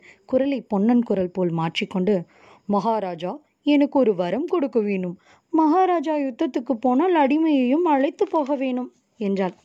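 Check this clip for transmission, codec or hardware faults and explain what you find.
Good news: I listened through this speech recording and didn't hear any faults at all, so there's nothing to report.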